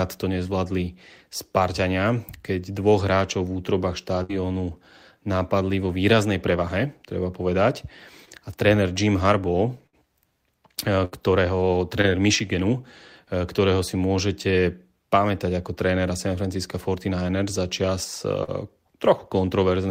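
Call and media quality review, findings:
Burst of packet loss at 4.23–4.31 s, 9.87–9.95 s and 11.05–11.13 s: jitter buffer/decoder concealment holds last speech as fading buzz or hiss for 56–66 ms, then resumes with 60 ms missing.

Short concealed packet loss at 8.25–8.29 s, 12.01–12.05 s and 18.43–18.49 s: decoder extrapolates 20, 20 and 40 ms of missing audio, then crossfades back, heard as brief smear or wobble.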